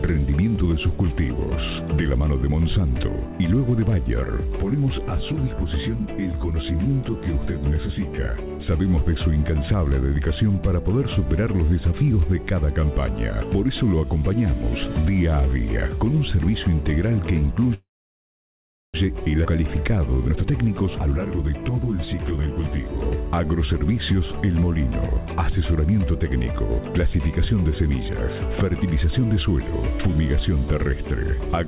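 Call audio freeze from 17.74 to 18.96 s: the sound stalls, trails off briefly and then sits almost silent for roughly 1.06 s, likely because delayed packets emptied the jitter buffer, before resuming where it stopped with nothing lost. Skip ahead at 19.44 to 19.47 s: playback jumps forward with almost no gap, dropping around 0.7 s of audio while later audio was already queued, so the two sides are butted together. Jitter buffer speed-up from 20.28 to 22.48 s: the receiver trims short pitch-period pieces repeatedly, running the audio at 122% speed without a pitch change and shedding about half a second of built-up delay. Throughout, the sound carries the call path's coding noise and has nothing above 4 kHz, which points to G.711 mu-law at 64 kbps.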